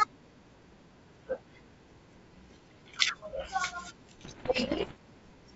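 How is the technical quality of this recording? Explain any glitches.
The recording has one clear fault, a burst of damage near the end of this speech clip, carried over G.722 wideband telephone coding whose bandwidth, reaching about 7 kHz, fits the full 64 kbit/s mode.

Bit errors on an ADPCM link, 4.23 to 4.99 s: roughly 2 percent of bits are flipped on the way to the decoder. Because ADPCM codes each sample as a change from a prediction, every wrong bit also knocks the decoder's step size and predictor off track, so the error rings on for a few milliseconds. The result is a stretch of pops and rough, crackly bursts with brief jumps in level lasting most of a second.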